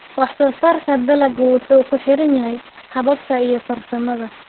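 From start to finish the speech carries heavy Opus voice compression. Nothing remains above about 4.3 kHz, so the band is narrowband and the top of the voice is gone, leaving it muffled. The excitation is coded coarsely by the SILK linear-prediction coder, which gives a hoarse, buzzy, slightly robotic quality. The depth of the damage points to a very low bitrate, on the order of 6 kbps, with long codec frames.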